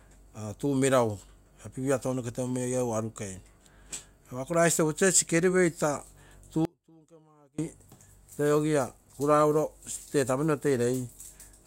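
At 6.65 s the speech drops out abruptly for about 0.93 s, to 7.59 s, leaving an audio dropout to a faint residue roughly 30 dB below normal, likely a brief upstream signal loss. The waveform collapses to a thin band, and the spectrogram shows a near-empty vertical gap with hard edges.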